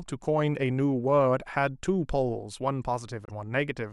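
Corrupt frames were decoded at 1.66–1.77 s and 3.25–3.30 s: flipped bits misplaced spectral energy over a few frames, producing a faint blip, then a much louder burst.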